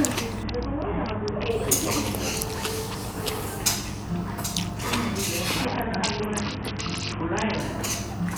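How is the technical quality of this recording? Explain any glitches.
The recording has two stretches of Bluetooth SBC bit pool drop, from 0.43 to 1.50 s and from 5.65 to 7.60 s. The treble goes dull and a gritty, granular noise rides on the sound, which fits a congested link where the bit pool fell from about 31 to about 6, near 55 kbps. The top sub-bands starve and the rest are coarsely quantised. Unlike packet loss, the sound never drops out, and unlike a plain low-pass filter, it turns grainy.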